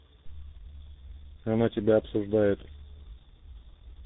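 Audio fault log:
throughout: tandem speech coding. The call appears to pass through two speech codecs in a row, a low-rate coder that points to G.723.1 followed by a CVSD stage, the second re-encoding the first's degraded output. Speech sounds rough, muffled and warbly, with nothing above 3.8 kHz.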